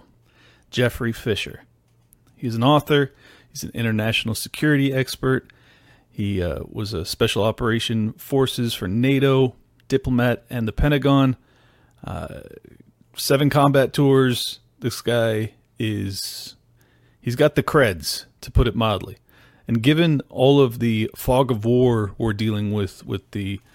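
No faults detected anywhere in this speech recording.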